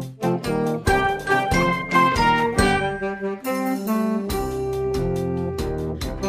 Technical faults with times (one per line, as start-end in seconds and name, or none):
none